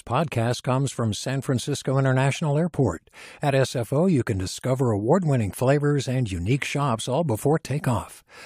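No technical faults can be heard anywhere in this speech recording. Nothing in the audio points to a problem in how it was captured, processed or delivered.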